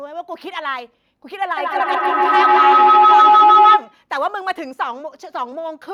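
From 1.57 s to 4.06 s the speech is overtaken by feedback howl. Two devices sharing one room and one call create a microphone-to-loudspeaker loop whose gain exceeds unity, so each pass returns louder than the last. The repeats narrow to a tone of roughly 1.5 kHz, with the loop coming round about every 150 ms, and peak at about 12 dB above the speech before the loop breaks at 4.06 s.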